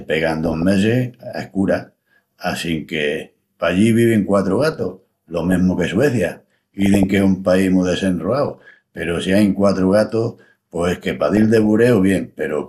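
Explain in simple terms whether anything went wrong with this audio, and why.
The speech has DAB burbling at 0.43 to 0.62 s, 4.6 to 5.54 s (right after "pallí vivin quatru"), 6.35 to 7.03 s, 8.48 to 9.03 s and 11.12 to 11.66 s. Weak digital radio reception let data errors through. These made some pitch bands jump in loudness.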